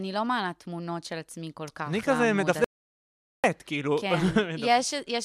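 The input feed to the recorder was likely lost for a moment, leaving an audio dropout to silence in this speech clip: from 2.64 s to 3.44 s the signal falls silent with no room tone. About 0.8 s of speech is simply missing before it resumes mid-flow.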